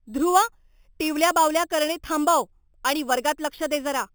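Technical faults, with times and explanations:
Throughout, imaging from sample-and-hold upsampling: a bright metallic fizz tracks the speech at about 13 dB down, its lowest mirrored band covering 4 to 8 kHz. Samples were repeated unsmoothed, fitting an 8 kHz original raised to 44.1 kHz, so that band moves against the pitch.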